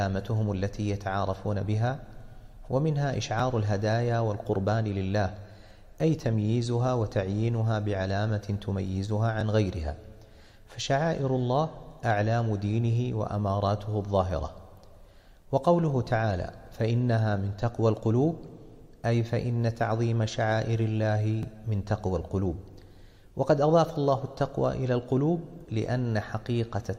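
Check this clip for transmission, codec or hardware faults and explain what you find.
Overlapping chunks occur at 3.40, 9.41, 15.42 and 21.43 s. The audio was handled in 6-second chunks, each beginning 12 ms before the previous one ended, so that 12 ms piece plays twice at every join, heard as a brief click or stutter recurring every six seconds.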